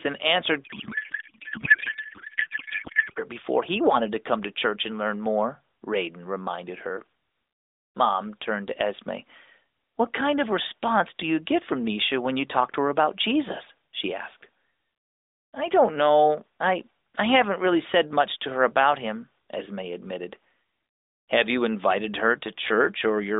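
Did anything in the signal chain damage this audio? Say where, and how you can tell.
Yes, at the codec: a codec payload misread from 0.64 to 3.19 s, right after "and answered" until "before he wanted to". The speech turns to garbled warble, which fits octet-aligned AMR frames being unpacked as bandwidth-efficient.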